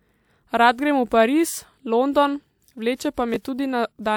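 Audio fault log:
1.09–1.11 s, 2.95–3.00 s and 3.14–3.18 s, pre-echo: a short hiss arrives just ahead of each of three sharp attacks in the speech, lasting 22 ms, 49 ms and 37 ms. The codec shares quantisation noise across a whole transform block, so when the onset lands late in a block, noise meant to be hidden under the loud attack spills into the quieter moment before it, blurring the attack.
3.34–3.36 s, chunks out of order: a 10 ms slice of audio plays one chunk late, swapped with the chunk that should follow it. No sound is missing, but the order breaks, and the three hard joins where the misplaced slice meets its neighbours cut through the waveform, so this brief spot comes across as a jumbled moment in the speech rather than a smooth continuation.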